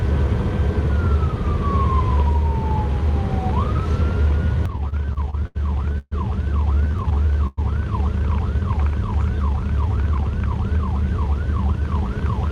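From 4.67 to 5.57 s the audio falls into repeated stalls (stutter): eight short breaks, the longest 80 ms, bridged by stretching the last sound. About a quarter of that stretch is filled this way. Packets kept reaching the jitter buffer late, so it ran dry again and again. Nothing is lost, but the sound drags and hiccups. What sets it apart from a freeze is the run of many brief interruptions rather than one hold.

At 5.98 to 6.13 s comes a single call audio freeze. The last sound is held for about 131 ms, with the final 20 ms fading to silence, before the audio picks up where it stopped. A burst of packets held up in transit, which likely emptied the buffer once, would explain it. The result is one inserted pause, with no skipped material and no chain of stutters.

From 6.75 to 7.59 s the stutter returns, this time with ten breaks totalling 220 ms. The longest lasts 104 ms, and again roughly a quarter of the span is filled in. 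The same late arrivals cause the same dragging, broken motion.

Between 9.71 and 11.02 s a jitter buffer speed-up drains the backlog. The receiver trims tiny pitch-period slices many times, so the audio runs at 111% speed with unchanged pitch, and around 150 ms is dropped. Unlike the stalls, this sounds hurried and never halting.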